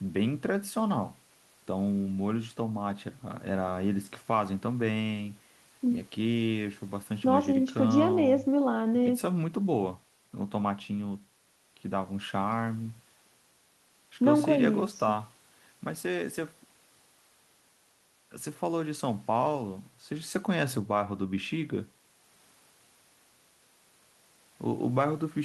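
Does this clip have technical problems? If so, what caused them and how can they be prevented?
No, no technical problems can be heard here.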